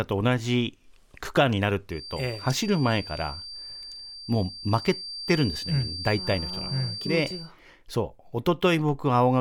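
A feedback whistle runs from 1.88 s to 7.54 s in this speech clip: a thin, steady tone near 4.7 kHz sitting roughly 15 dB below the speech and swelling and fading slowly in level. The likely cause is a loudspeaker-to-microphone loop held just at the edge of instability, so that one frequency keeps recirculating at a low level instead of growing into a full howl.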